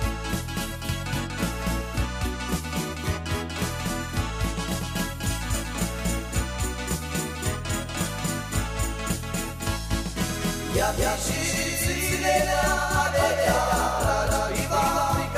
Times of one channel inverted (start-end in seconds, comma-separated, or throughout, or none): none